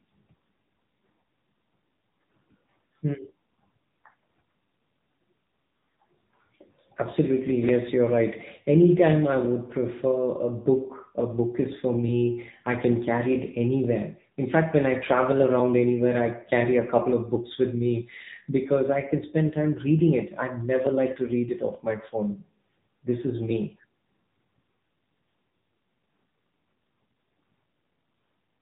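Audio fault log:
throughout, AMR narrowband mobile codec: nothing passes above 3.8 kHz, and the speech takes on a buzzy, synthetic edge, which fits a low mode near 7.95 kbps. Unlike a plain telephone band-limit, the vocal-tract model itself smears and roughens the voice.
0.65 to 27.90 s, clock drift buffer slips: a click recurs every 0.878 s, about thirty in all, likely from two mismatched clocks forcing a short block of a few dozen samples to be dropped or repeated. The strict regularity separates it from random dropouts.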